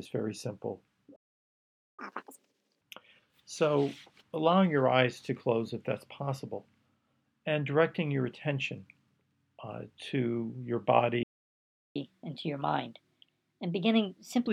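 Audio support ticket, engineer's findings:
Playback stall at 1.16 s. Output drops to silence mid-flow for about 0.82 s, resumes at 1.99 s. Likely cause: player buffer underrun or blocked audio thread, with nothing fed to the device until recovery.

Playback stall at 11.23 s. Silence for about 0.72 s, resumes at 11.96 s. Same likely mechanism: buffer ran dry or the thread was held off.

Catch-up at higher speed, 1.99 to 2.81 s. Audio runs at 2x speed, pitch raised by nearly an octave. Player resampling its backlog to recover the lost time, then back to normal rate.

Catch-up at higher speed, 11.96 to 14.47 s. Audio runs at 1.25x speed, pitch up by a few semitones. Gentler resample-based catch-up over a longer window after the second stall.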